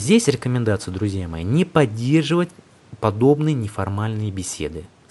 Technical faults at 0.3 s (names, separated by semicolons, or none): none